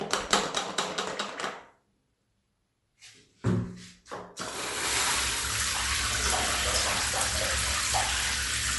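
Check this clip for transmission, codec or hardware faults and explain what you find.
One codec fault runs through the whole clip of sounds. Bluetooth LC3 compression, throughout: likely an LC3 link, which fits about 48 kbps in 10 ms frames. Its bit-starved transform leaves nothing above 11.5 kHz and noise-filled bands, so the sounds have a plainly audible grainy, breathy edge.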